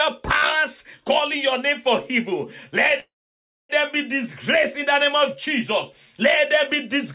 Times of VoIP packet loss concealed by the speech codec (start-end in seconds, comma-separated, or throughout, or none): none